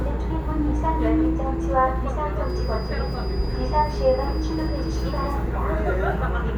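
A feedback whistle runs from 2.38 to 5.42 s: a thin, steady tone at 4.9 kHz sitting some 25 dB below the main sound and wavering slightly in level as it holds. The likely cause is a loudspeaker-to-microphone loop hovering right at its feedback threshold, so that single frequency keeps recirculating and sustains itself without building into a runaway howl, then drops away at 5.42 s.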